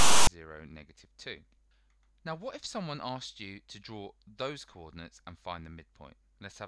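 The clip opens with file tags played as audio, from 0.00 to 0.27 s. A block of text metadata was read as if it were sample data. It sounds like a loud, lopsided rasp of static. It starts and stops abruptly, with hard edges.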